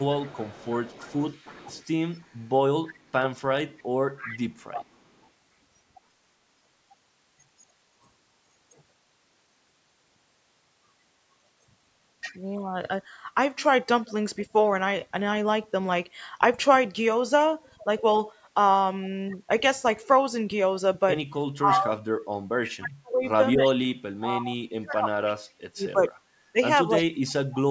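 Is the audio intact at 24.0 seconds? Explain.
No. Speech suppressed in double talk runs from 21.57 s to the end. With both sides talking, the echo canceller likely ducked this talker, dropping the voice in pieces by up to about 35 dB. An echo leak from 23.66 to 24.2 s adds a faint copy of the voice, about 20 dB down and 322 ms late, likely loudspeaker pickup that one side's canceller missed.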